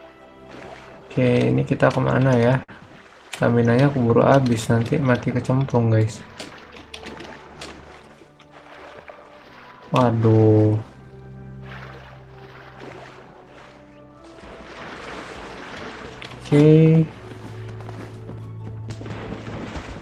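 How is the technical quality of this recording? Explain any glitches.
There is one glitch, a short stall from a late packet, between about 2.63 and 2.74 s. A packet arrived after its playout time, the jitter buffer ran dry, and the receiver stretched the last sound for about 50 ms before resuming exactly where it left off. It is heard as a brief hold with a slight buzzy or dipping quality. Unlike a lost packet, nothing is skipped: the sound continues intact, just slightly delayed.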